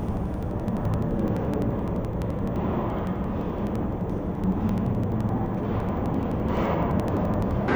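Interleaved audio read as planar runs throughout the clip: each block of alternating left and right samples is split into halves and read as two channels. Each half plays at half speed, so the everyday sounds drop an octave and sound doubled and choppy. The 85 ms blocks, which fit a 4096-sample block, stutter at 11.7 Hz.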